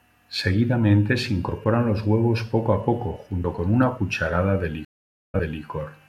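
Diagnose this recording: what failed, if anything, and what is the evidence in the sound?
Right after "huevos poco a poco", at 3.44 s, there's a skip of about 50 ms into "con una". That's audio missing between chunks, likely a buffer stage dropping samples at a 2-second chunk boundary.

From 4.85 to 5.63 s there's a stream reconnect at the network stage: roughly half a second of silence, then a fresh decoder picks up about 0.34 s earlier, repeating some audio.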